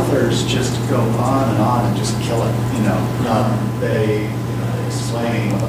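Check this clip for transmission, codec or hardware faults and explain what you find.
One fault is present. From 3.42 s to the end, channel delay (doubling): one channel lags 92.9 ms, which fits a 4096-sample buffer. The mono sum carries an equal-level slap echo, with every onset doubled on the waveform and spectrogram.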